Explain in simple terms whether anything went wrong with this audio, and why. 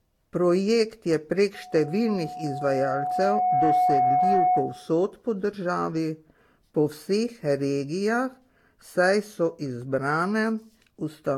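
Yes, two things went wrong. From 1.54 to 4.93 s a steady whistle at about 731 Hz swells over roughly two seconds until it sits louder than the speech. This is loudspeaker feedback squeal: a microphone picked up the speaker it was feeding, and that one pitch kept amplifying itself around the loop.

Throughout the clip the speech sounds swirly, hollow and smeared, with soft, blurred starts to sounds. This is generation loss, likely from the recording being squeezed through a lossy audio format about four times over, each pass adding fresh damage on top of the last.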